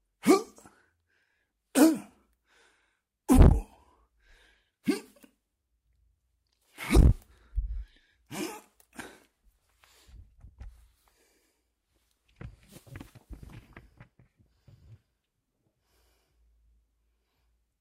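No audible technical faults present.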